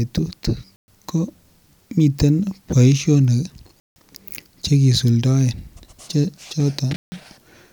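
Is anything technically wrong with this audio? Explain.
Yes, there are three blocks of digital silence in this speech clip: 0.76 to 0.88 s (120 ms), 3.80 to 3.96 s (160 ms), and 6.96 to 7.12 s (160 ms). In each one, a run of samples has been swapped for zeros, most likely because the output buffer wasn't filled in time. The audio drops straight to dead silence and comes straight back with no fade, leaving a short hole in the speech.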